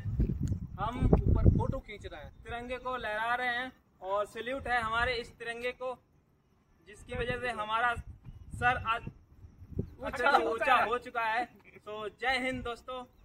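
Nothing in this recording stands out as a technical problem, so there's nothing to point to at any moment along the way.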